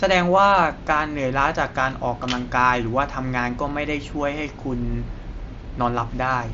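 Nothing goes wrong anywhere in this bit of speech, which simply comes through a Bluetooth mSBC headset link with that path's usual top end of around 8 kHz.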